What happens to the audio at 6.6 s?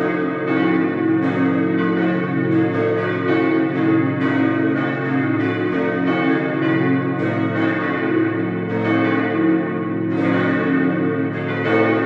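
Nothing goes wrong at 6.6 s; the audio plays through that moment intact, with no dropout, click or other fault.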